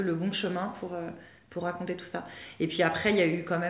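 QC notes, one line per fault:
No faults are present; the signal has passed through a WebRTC call path using G.711 mu-law at 64 kbps, so its bandwidth stops at 4 kHz with the codec's usual coding noise underneath.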